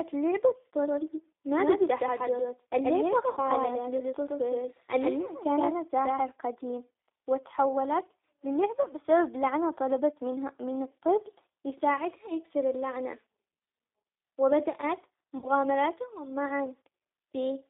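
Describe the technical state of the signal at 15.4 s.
Right at 15.4 s there's a dropout from VoIP packet loss concealed by the speech codec, running about 15.38 to 15.46 s. Roughly 40 ms went missing, which fits two lost packets. The decoder papered over the gap by repeating its last pitch and filter, so you get a brief buzzy, fading smear. The speech stays a bit weak just after.

Underneath it all is the G.729 codec at 8 kbit/s, with the band held to about 250 Hz to 3.7 kHz, so the speech sounds noticeably rough and synthetic.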